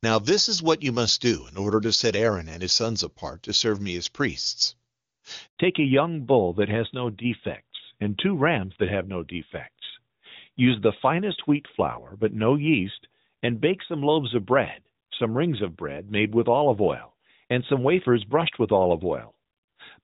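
Speech, carried over a phone call. A handover gap runs from 5.47 to 5.57 s. The sound dies away and falls silent for 100 ms while the call switches networks. Then comes a fallback to narrowband. Before 5.57 s the sound is full and clear, fitting HD Voice near its top rate. From 5.57 s to the end, everything above 4 kHz is gone, and the sound turns duller and rougher. That points to an older narrowband codec at about 12.2 kbit/s.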